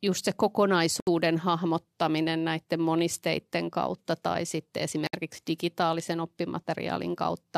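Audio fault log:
1.00 to 5.13 s, gap at a join of encoded pieces, twice, at 1.00 s lasting about 70 ms and at 5.07 s lasting about 64 ms, four seconds apart. The speech simply stops, then resumes where it left off. Each piece was encoded on its own and joined untrimmed. The encoder's start-up delay and the padding of each last frame stayed in as silence. The codec smears the edges of each gap, so the silent part is shorter.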